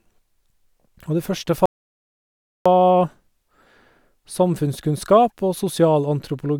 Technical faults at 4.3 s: none

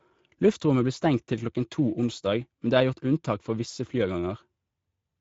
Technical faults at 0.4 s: Speex codec

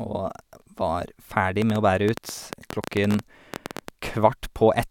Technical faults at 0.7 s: none

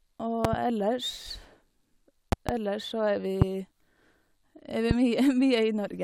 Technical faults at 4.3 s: none

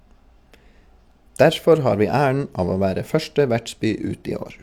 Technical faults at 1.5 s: none

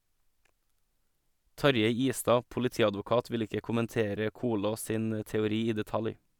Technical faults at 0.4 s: none

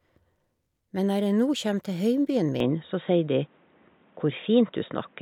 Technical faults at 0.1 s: none

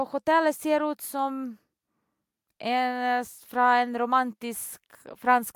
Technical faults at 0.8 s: none

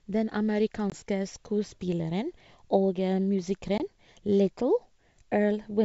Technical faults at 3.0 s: none

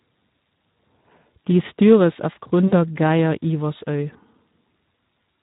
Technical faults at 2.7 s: Speex codec; VoIP packet loss concealed by the speech codec

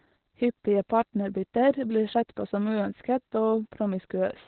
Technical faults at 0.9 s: Opus voice compression

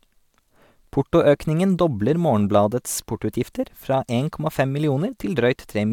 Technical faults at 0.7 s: none

